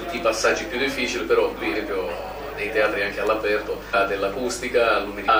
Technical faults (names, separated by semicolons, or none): damaged data in a compressed stream